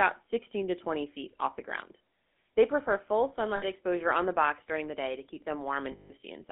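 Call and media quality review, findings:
Buzzy, gravelly roughness on the speech throughout, band-limited to roughly 250 Hz to 3.6 kHz. GSM full-rate codec: vocal-tract model driven by sparse regular pulses, coarse excitation. Consistent with 13 kbps full rate. Damage plainly audible.

3.56 to 3.64 s, between "prefer full" and "exposure on the box": brief rough, metallic ring on held sound. Lost GSM frames: decoder repeats the last good frame. 60 ms gap, fitting about three frames.

5.92 to 6.11 s, after "the day to keep": longer rough, metallic ring. Lost GSM frames, concealment by repetition over 180 ms, fitting roughly nine frames.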